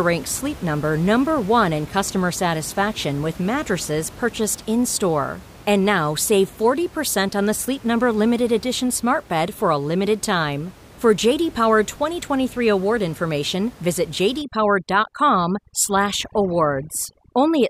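From 14.42 s to the end, after "award information visit", overdone noise removal sets in: the suppressor is far too aggressive, cutting bands it mistakes for noise. The room noise, about 21 dB below the speech, drops to near silence with twinkling specks.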